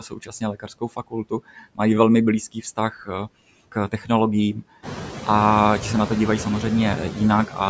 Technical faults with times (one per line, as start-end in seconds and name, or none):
0.00-7.69 noise suppressor artifacts
0.00-1.79 speech cut by the noise suppressor